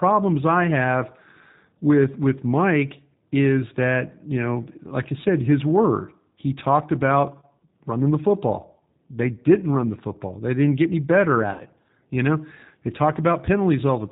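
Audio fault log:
Throughout, G.729 codec: the audio is rebuilt at 8 kbit/s from a vocal tract filter, a pitch predictor and sparse pulses, so it sounds slightly rough and synthetic. A spectrogram shows a hard ceiling with nothing above 4 kHz.
11.53–11.62 s, VoIP packet loss concealed by the speech codec: right after "didn't get any better", about 60 ms is missing, which fits two lost packets. The decoder extends its last pitch and filter at falling gain, so the sound is stretched and fades out. A spectrogram shows smeared, repeated harmonic bands, and the waveform shows a decaying envelope before the signal recovers.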